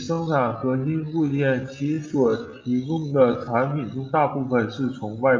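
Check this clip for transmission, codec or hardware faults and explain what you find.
One fault: a time-stretched section from the start to 3.78 s. Over that stretch the speech drags at about two-thirds of normal pace while its pitch stays put, then snaps back to natural speed. That points to software that likely lengthened the passage to fill a set duration, holding pitch steady by repeating short slices of the waveform.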